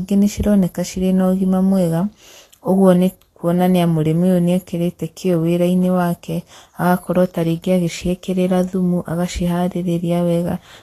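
Throughout, the speech sounds hissy and grainy, with nothing above 14.2 kHz. This points to low-bitrate Vorbis compression, likely around 34 kbps, turning coarsely quantised treble into noise.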